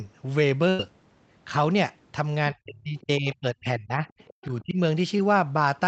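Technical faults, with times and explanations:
0.69–0.80 s, burst of packet loss: About 100 ms of speech is missing. The receiver stretches the last sound and fades it before the speech resumes further on. It is longer and more audible than a single-packet smear, and the skipped section shows it was not a level dip.
2.52–4.02 s and 4.61–4.78 s, speech suppressed in double talk: The talker's speech dips by up to roughly 30 dB, breaking up over about a second in the first span and briefly around 25 dB in the second. This is likely the echo canceller ducking both talkers while both speak. Nothing is skipped, which sets it apart from packet loss.
3.00–3.05 s and 4.08–4.62 s, other side's voice leaking through: A second voice sits around 30 dB below the main talker, first as a short scrap and then for about half a second. This is likely loudspeaker echo the canceller did not fully remove. It is an added voice rather than a loss of the talker's own sound.
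5.18–5.20 s, short concealed packet loss: Around 10 ms is replaced by a continuation of the preceding sound and then blended back. It comes across as a tiny smear or wobble rather than the held, fading tail of the longer burst near the start.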